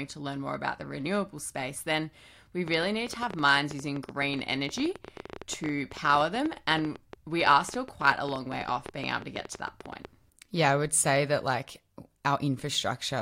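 From 2.68 to 10.06 s, just after "renewable space then we", a train of clicks ticks through the speech at about 10 per second, unevenly spaced, some 70 in all, peaking well above the voice. These clicks are alike in shape and continue through pauses, unlike random vinyl-style crackle, which points to likely interference.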